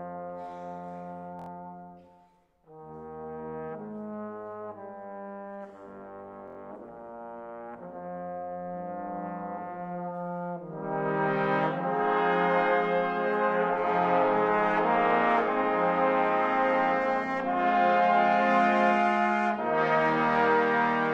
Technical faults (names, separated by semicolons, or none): repeated buffer